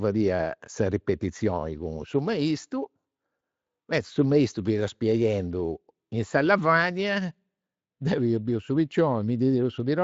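At 3.39 to 3.41 s the speech shows VoIP packet loss concealed by the speech codec: a brief smear where the Speex decoder, which carries the rest lightly coloured, extrapolated its last pitch and filter over what fits one lost 20 ms frame. Unlike a plain dropout, there is no silent gap or click.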